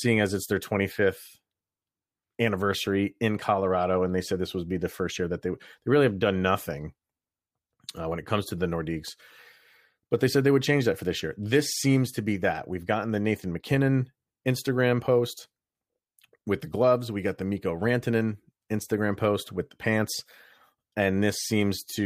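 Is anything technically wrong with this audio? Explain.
No, nothing in this speech recording stood out as a technical problem on listening.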